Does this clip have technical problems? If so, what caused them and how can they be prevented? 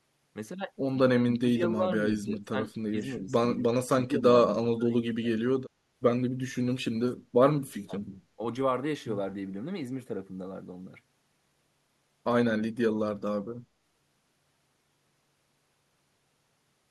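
Yes. The speech is suppressed in double talk at 1.34–1.84, 2.21–2.55, 2.9–3.35, 3.57–4.24, 4.76–5.42, 7.86–7.93 and 8.36–8.40 s. The level dips by up to about 30 dB, only slightly at 2.9 s. This is likely an echo canceller mistaking this side's speech, overlapping the far-end sound on the loudspeaker, for echo. Tuning the canceller's double-talk detection, or using headsets, prevents it.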